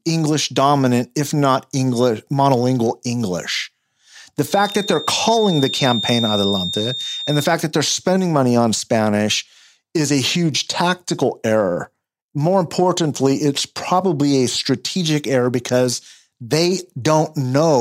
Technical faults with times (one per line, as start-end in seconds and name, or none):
4.45-7.55 feedback whistle